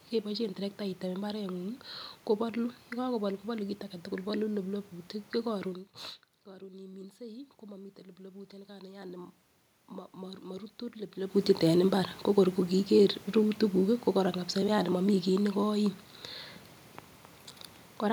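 From 6.44 to 9.37 s, the voice and the room noise behind it swell together, climbing steadily by about 7 dB over roughly three seconds. This is automatic gain rising. Around 5.5 s the talker moved back and the level reaching the microphone fell by about 17 dB. The gain control read that as a too-quiet input and slowly turned itself up, lifting the background noise along with the voice.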